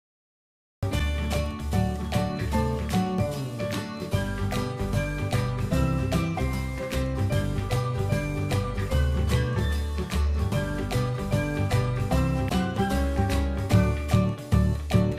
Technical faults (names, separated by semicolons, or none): cut-off start